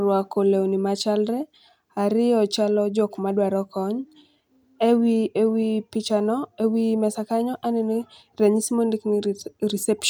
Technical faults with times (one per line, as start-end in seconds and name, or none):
none